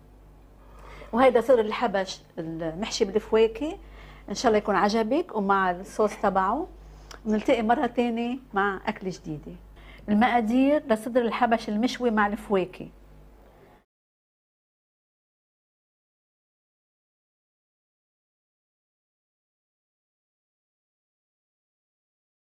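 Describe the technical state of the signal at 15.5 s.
At 15.5 s the signal is intact, with no dropout, clipping, distortion or other fault audible at that moment.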